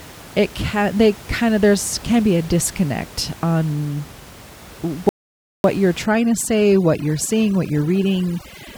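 At 5.09 s the speech cuts out and the output stays silent until 5.64 s, a gap of about 0.55 s, before resuming. This is a playback stall. The break falls mid-flow rather than at a natural pause, so it reads as dead air inserted into the delivery, not a hesitation. The likely cause is the player running short of buffered data or its output thread being held up, leaving nothing to send to the output until it caught up.

From 6.06 s to the end of the clip the signal shows overdone noise removal. The room noise, sitting about 20 dB below the speech before this point, drops away, with small twinkling artefacts left in the gaps. The suppression is gating individual frequency bands whenever they drop close to its noise estimate, and the softer parts of the speech spectrum are removed along with the noise.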